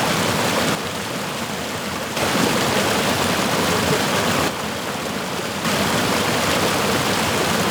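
From 0.75 to 2.17 s, and again from 4.48 to 5.65 s, the level sags abruptly by about 6 dB and then snaps back. That's likely one channel drops out: one stereo side goes silent, so the mono sum loses half its shared amplitude.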